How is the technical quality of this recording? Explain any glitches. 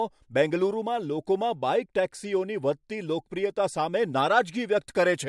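The technical quality of the recording is good, with no glitches to explain.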